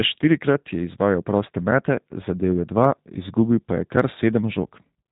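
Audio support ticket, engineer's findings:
Speech rough and synthetic, plainly audible, start to end. Nothing above 3.8 kHz. Probable component: G.729 codec in the VoIP path, sound consistent with the 8 kbit/s G.729A variant. Mechanism: each 10 ms frame rebuilt from a vocal tract filter, pitch predictor and sparse pulses, not the original waveform. Hence the buzzy, processed texture and missing top end.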